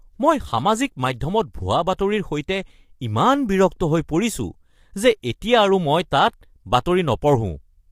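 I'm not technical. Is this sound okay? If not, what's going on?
No. The speech sounds rough and grainy for the whole clip, from start to finish. There is a hiss sitting between the tones of the voice. The top end sounds thin and artificial. This is most likely low-delay AAC compression, the kind used in video calls. It cuts sound into very short slices to avoid lag. Here it was squeezed into too little data to describe the voice cleanly, so detail is lost and noise creeps in.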